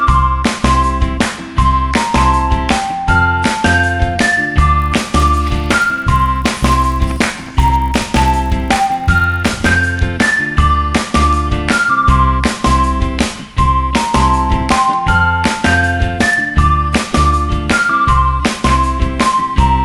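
From 4.8 to 9.68 s the audio carries a steady 50 Hz buzz that rides on the signal and vanishes in its gaps: the resampler restarted on every block. Each 20 ms block was converted separately, which points to a 24 kHz to 48 kHz upsampling, so every block edge lacks its true neighbouring samples and leaves a small error. A waveform shows tiny discontinuities every 20 ms, and a spectrogram shows faint vertical lines at that spacing, giving a comb of 50 Hz harmonics.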